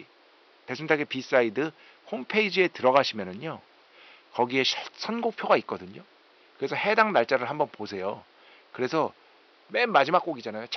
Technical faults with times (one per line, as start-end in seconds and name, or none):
none